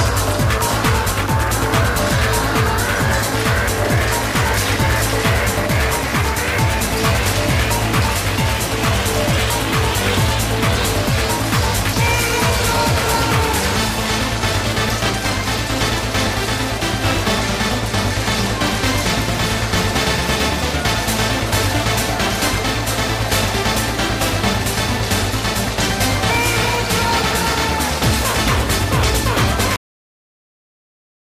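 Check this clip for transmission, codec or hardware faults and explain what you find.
Two faults: damaged data in a compressed stream, at three points, and a cut-off end.

Damaged data in a compressed stream occurs at 1.95–1.99 s, 14.85–14.90 s and 19.32 s. Corrupted bytes there make the decoder misread frames and lose sync until it finds the next valid header. Each event is a brief chirp or blip lasting up to about 44 ms.

The cut-off end comes at 29.76 s. The final buffers were never written or played out, so the audio halts mid-sound and falls straight into digital silence with no natural decay, possibly marked by a click, and stays silent to the end.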